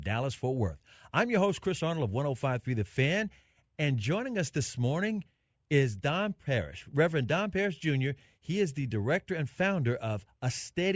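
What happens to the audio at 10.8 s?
Nothing goes wrong at 10.8 s; the speech carries on intact through that moment, with no dropout, click or distortion.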